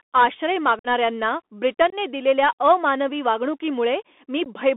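Speech carried over a Bluetooth CVSD headset codec, with the band confined to roughly 250 Hz to 3.5 kHz. The one-bit delta modulation, consistent with a 64 kbps link, leaves a granular hiss under the voice and scratchy, distorted sibilants where the step size cannot keep up. Unconcealed Bluetooth headset packet loss punches abrupt holes into the signal at 0.79–0.87 s (about 52 ms missing), at 1.90–1.94 s just before "दिलेल्या अमानवी" (about 22 ms), and at 4.44 s (15 ms). In each gap a few lost packets were replaced by silence or an idle pattern rather than concealed, so the speech cuts out with hard, abrupt edges.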